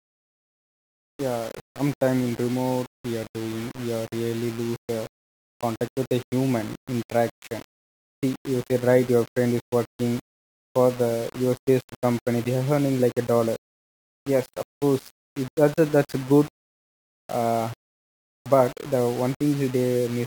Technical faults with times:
0.00-20.26 low bit depth without dither

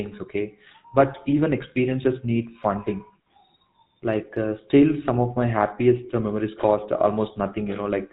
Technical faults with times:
0.00-8.12 GSM full-rate codec

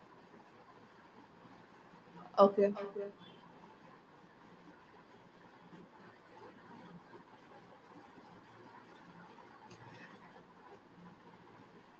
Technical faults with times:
1.05-3.22 feedback echo between two devices

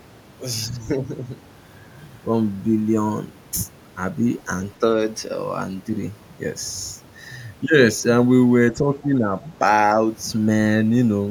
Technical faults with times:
8.71-9.32 speech suppressed in double talk
9.03-9.07 other side's voice leaking through

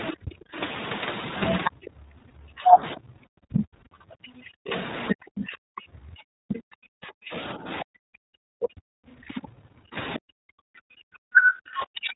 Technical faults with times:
0.00-12.15 iLBC codec
0.07-1.70 other side's voice leaking through
0.22-12.15 speech suppressed in double talk
1.70-7.57 background gated by the echo canceller
4.76-9.39 other side's voice leaking through
10.74-11.05 background gated by the echo canceller

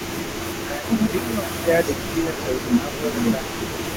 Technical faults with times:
0.00-3.96 echo leak
0.64-3.58 speech suppressed in double talk

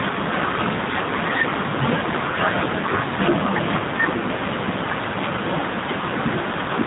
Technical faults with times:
0.00-6.87 G.729 codec

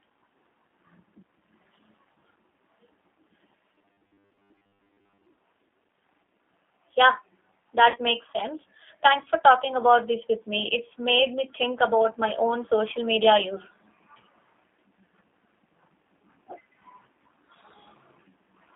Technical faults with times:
0.00-18.75 G.729 codec
2.14-2.16 VoIP packet loss concealed by the speech codec
3.75-5.26 robotic sound from repeated short buffers
7.90-7.99 VoIP packet loss concealed by the speech codec

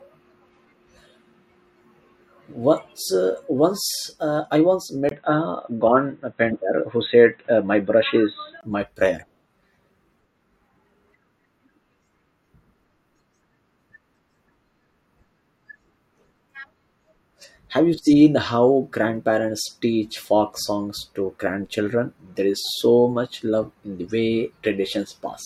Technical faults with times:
5.09-8.63 input switched to a poorer device

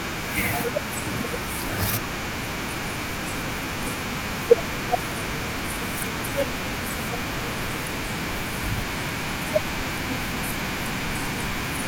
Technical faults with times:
0.94-9.31 clock drift buffer slips

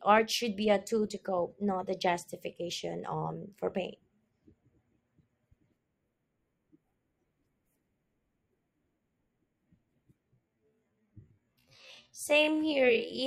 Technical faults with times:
10.27-13.27 time-stretched section

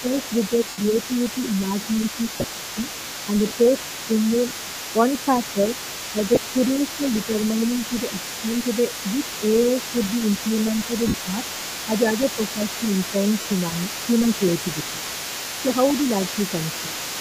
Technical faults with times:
0.00-17.21 other side's voice leaking through
0.01-4.31 speech suppressed in double talk
0.69-0.78 lost LE Audio frames
2.32-2.44 lost LE Audio frames
4.49-4.51 lost LE Audio frames
5.54-8.50 speech suppressed in double talk
6.35-6.37 lost LE Audio frames
9.42-12.64 speech suppressed in double talk
11.08-11.14 lost LE Audio frames
13.41-13.45 lost LE Audio frames
13.71-15.77 speech suppressed in double talk
16.86-16.96 speech suppressed in double talk

